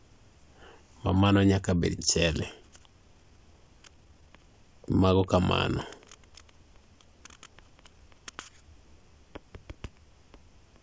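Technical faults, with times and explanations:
1.98–2.00 s, skip ahead: right after "ma mano nyaka bed" playback jumps forward with no gap filled in. Roughly a second of speech was discarded, likely by an overflowing jitter buffer while later audio was already queued, so the two sides join almost directly.
2.23–5.41 s and 5.99–6.31 s, jitter buffer speed-up: the buffer held more audio than its target, so the receiver repeatedly cut short pitch-period pieces. Speech runs at 117% and then 111% speed with unchanged pitch and sounds hurried, shedding about half a second and then a few tens of milliseconds.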